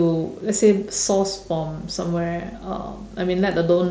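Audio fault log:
No faults found in this speech.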